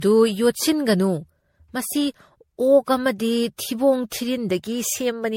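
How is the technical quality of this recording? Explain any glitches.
The quality is degraded throughout by one fault. Generation loss runs throughout: the speech was likely re-encoded around seven times with MP3, roughly fitting 64 kbit/s, stacking quantisation noise into swirly, hollow, smeared attacks, with nothing above 16.5 kHz.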